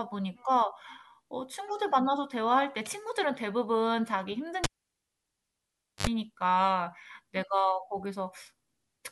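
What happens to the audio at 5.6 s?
At 5.6 s the sound falls into a cable pulled and plugged in fault (4.64–6.07 s): a pop, near silence and a flat waveform, then a brief 50 Hz buzz line as the tip touches, and another pop.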